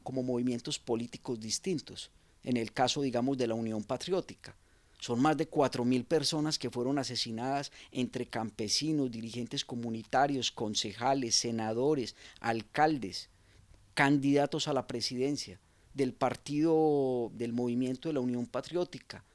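Nothing here jumps out as a technical problem; the audio just runs along without any glitch or hiccup worth pointing to.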